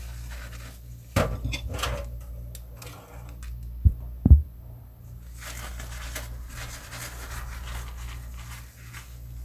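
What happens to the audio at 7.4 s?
Nothing goes wrong at 7.4 s; the sounds carry on intact through that moment with no dropout, click, distortion or other fault.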